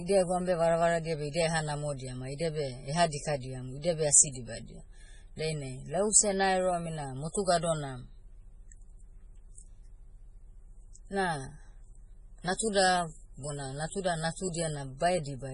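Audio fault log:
Throughout, MP3 compression: nothing is heard above 10.5 kHz, and the speech sounds heavily watery and swirly, with smeared attacks. This is likely a bit-starved MP3 encoder cutting the treble and flickering weak frequency lines between frames, which fits about 24 kbps.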